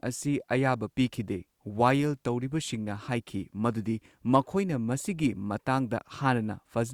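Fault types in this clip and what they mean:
No fault types are present in this clip.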